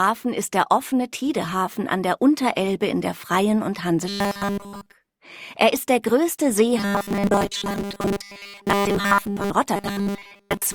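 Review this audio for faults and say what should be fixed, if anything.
Robotic sound from repeated short buffers appears at 4.08 to 4.94 s, 6.78 to 9.51 s, and 9.76 s to the end. A fixed 200 Hz buzz sits over the audio. That fits a repeated 5 ms slice. The likely cause is new audio arriving too seldom, so playback loops its last fragment. The first stretch is entirely repeats. The later two are mostly repeats. To prevent it, enlarge the jitter buffer and keep audio delivery steady.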